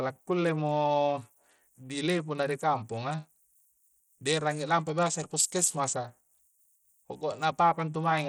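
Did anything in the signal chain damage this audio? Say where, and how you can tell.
Yes, at the codec stage: likely Bluetooth SBC compression with a low bit pool, around 80 kbps, starving the upper sub-bands. The speech's treble flickers throughout, with gritty aliasing.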